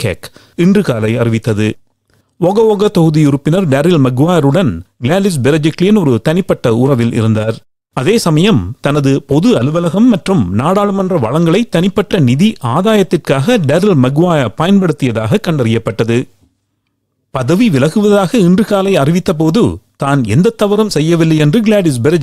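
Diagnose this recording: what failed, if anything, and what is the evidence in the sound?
Nothing failed anywhere.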